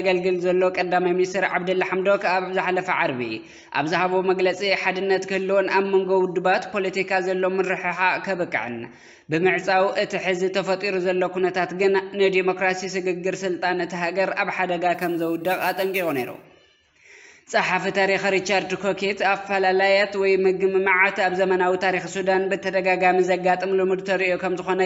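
From 14.94 to 16.44 s a bright, metallic fizz rides on top of the sound, rising and falling with its level, about 20 dB below it. This is imaging from sample-and-hold upsampling: each sample was repeated without smoothing, which fits a 16 kHz to 44.1 kHz conversion, mirroring the spectrum into the 8 to 16 kHz band.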